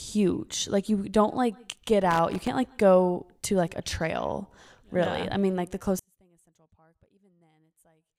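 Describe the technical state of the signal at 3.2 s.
At 3.2 s the speech signal is intact, with no audible fault at that moment.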